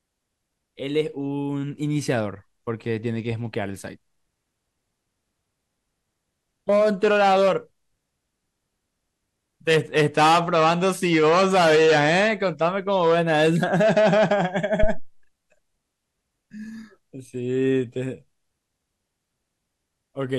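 At 14.83 s a deep, low-frequency thump cuts across the speech, peaking at about -7 dBFS and dying away over roughly 70 ms, with the disturbance settling by 15.15 s. This is a phantom power thump: the supply on the microphone input was switched on or off while the channel was live, and the sudden voltage step passed through the input's coupling capacitors as a single heavy bump.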